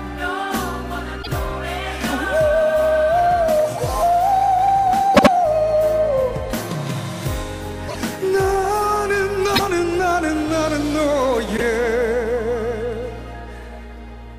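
Repeated frames at 1.22, 5.14, 7.88, 9.55 and 11.56 s replay blocks of 26 to 78 ms, giving a stutter that, unlike a dropout, loses nothing and instead lengthens the audio.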